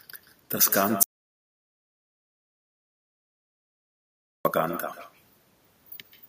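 From the start, each phrase is trailed by a quieter, thinner copy of itself arriving roughly 150 ms later and about 13 dB down. This is echo with no canceller: the far end's loudspeaker feeds its microphone, and nothing removes that return path.

At 1.03 s the speech stops dead and gives way to silence, with no room tone at all, until 4.45 s, so about 3.42 s of audio is missing. This audio dropout to silence was likely caused by the input being lost while the recorder kept writing silence.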